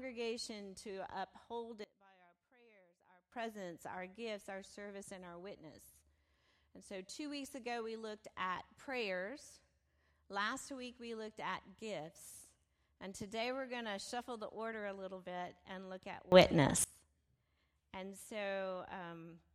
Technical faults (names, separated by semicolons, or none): sudden gain jump